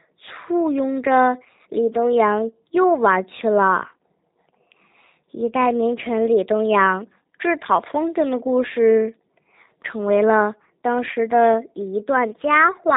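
From start to finish, the speech carries G.729 codec damage, and it is plainly audible. The codec rebuilds each 10 ms frame from a vocal tract filter, a pitch estimate and a few pulses. It does not send the real waveform. Nothing above 4 kHz survives, so the sound is dull and boxy. Voiced parts sound rough and slightly synthetic. The character points to G.729A at around 8 kbit/s.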